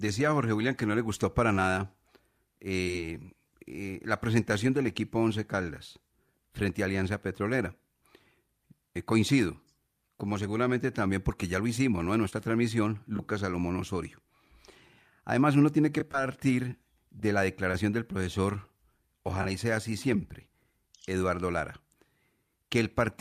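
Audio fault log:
2.83 s, 12.30 s, 16.12 s, 17.71 s, short concealed packet loss: each time about 20 ms of the call arrived too late, so the receiver extended the preceding sound (13 to 22 ms filled) and blended back, giving a quick smear; at 2.83 s, 11 ms was also dropped.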